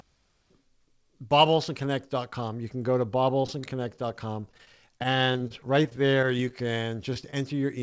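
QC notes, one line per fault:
3.42–6.53 s, repeated packet loss (robotic sound): dozens of dropouts up to 26 ms, each patched by repeating prior sound, giving choppy texture; spectrogram shows smeared, repeated frame slices.
7.14 s, 7.21–7.24 s, 7.31–7.33 s, short concealed packet loss: brief holes filled by extending the preceding sound, heard as small smears or wobbles; waveform shows repeated cycles blended back into the audio.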